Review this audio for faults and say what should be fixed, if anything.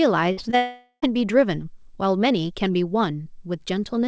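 A burst of packet loss runs from 0.32 to 0.39 s. About 60 ms of audio never arrived, and the receiver stretched the last sound for roughly 53 ms, turning it down as it went, so a fading held buzz or hiss replaces the missing stretch before the audio resumes further along.

Short concealed packet loss follows at 0.51 to 0.54 s. About 20 ms went missing, and the decoder covered it with a brief continuation of the preceding sound, roughly 12 ms, then blended back into real audio. The result is a quick smear or wobble rather than a clean gap.

Immediately after, from 0.56 to 1.04 s, the sound turns into a continued, decaying buzz or hiss for most of that half second, ending in about 80 ms of near-silence, and then resumes with roughly 460 ms of content gone. This is likely a long network dropout, where nothing reached the receiver and concealment ran until it gave up. Throughout, the band stops at 8 kHz, which fits a G.722 wideband call path.

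Preventing these means stabilising the network link, enabling forward error correction or redundancy, and sizing the jitter buffer to absorb bursts of late packets.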